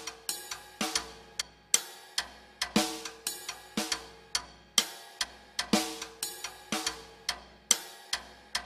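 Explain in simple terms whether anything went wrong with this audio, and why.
Damaged data in a compressed stream at 1.40–1.42 s and 5.23–5.25 s: corrupted bytes made the decoder misread frames and lose its place, causing brief blips.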